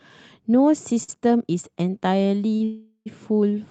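At 1.03 to 1.10 s and again at 2.56 to 2.62 s, a packet arrived late and the jitter buffer emptied, causing a short stall from a late packet. The receiver held the last sound for 48 ms and then 37 ms, so the speech briefly drags with a faint buzzy smear before resuming without loss.

From 2.64 to 3.08 s there is a call audio freeze, likely from packets held up in transit. The sound turns into a fading buzz for 420 ms, including about 70 ms of silence, then picks up exactly where it stopped, with the Opus path's roughly 12 kHz bandwidth throughout.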